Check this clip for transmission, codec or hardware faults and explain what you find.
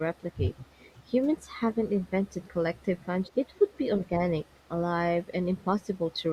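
The speech carries three faults: heavy noise processing throughout, repeated dips in the talker's level, and a faint delayed echo.

Overdone noise removal runs through the whole clip. The noise reducer was set so aggressively that any frequency band sitting close to its noise estimate is pulled far down or switched off entirely, taking the softer parts of the speech along with the noise. The background collapses to near silence scattered with twinkling, chirpy specks.

Speech suppressed in double talk appears at 0.14–0.71 s, 1.34–2.12 s, 3.68–4.28 s and 5.25–5.66 s. The likely cause is the far end talking at the same moment, so the echo canceller could not separate the local talker from loudspeaker echo and attenuated everything. The speech sinks, by roughly 25 dB at its deepest in the first stretch and around 15 dB in the later ones, sounding dulled or broken into pieces.

Echo leak shows up at 0.51–0.94 s, 2.76–3.78 s, 4.54–4.60 s and 5.81–6.16 s. 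The likely cause is a far-end loudspeaker whose echo canceller let part of the microphone pickup through and sent it back. A copy of the speech trails 215 ms behind the original, very quiet, about 30 dB below it in the first two stretches and about 40 dB below in the last two. It sounds faint.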